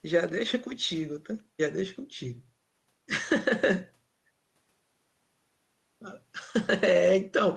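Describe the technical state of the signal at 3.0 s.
At 3.0 s the speech is intact, with no dropout, glitch or distortion, just the steady sound of its ordinary call-codec path.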